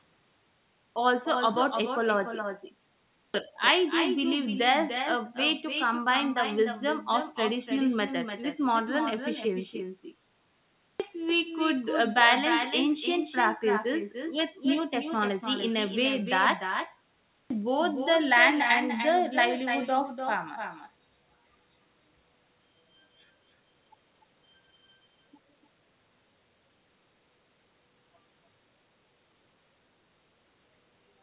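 Right from the start there's an echo with no canceller: the far end is playing the call out loud and its mic sends it straight back, so every phrase gets a thinner copy about 7 dB down, trailing by roughly a third of a second.

Then there's a clipped start after a pause, four times. The playback device seems to doze off in the gaps and takes about half a second to wake, so speech jumps in abruptly, its opening chopped: at 0.47 s (0.49 s lost), 2.79 s (0.55 s), 10.51 s (0.49 s) and 17.0 s (0.50 s). The band tops out at 4 kHz, consistent with G.711.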